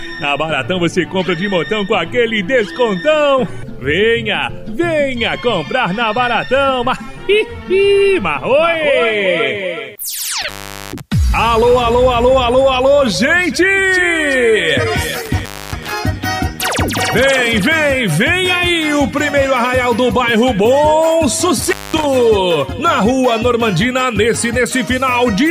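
The audio drops out three times, at 10.42, 15.25 and 21.60 s, each gap edged with crackle, lasting about 0.42, 0.27 and 0.21 s. This is an intermittent contact: a loose cable or plug briefly breaking the signal path.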